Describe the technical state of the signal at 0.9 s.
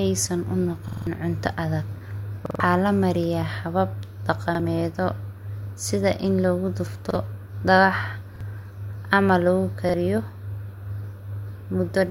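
At 0.9 s the signal is inside a repeated buffer, running from 0.88 to 1.07 s, just after "saan u" and before "cunta adag". Fresh audio failed to reach the output in time, so the device replayed its last block, a 46 ms piece that fits a 2048-sample buffer, four extra times. The result is a rapid, mechanical stutter with a hard seam at each repeat, and about a fifth of a second of real speech never plays.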